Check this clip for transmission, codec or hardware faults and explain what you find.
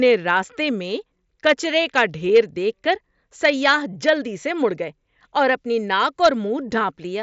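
No transmission, codec or hardware faults.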